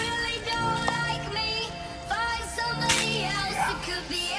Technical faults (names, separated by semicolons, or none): none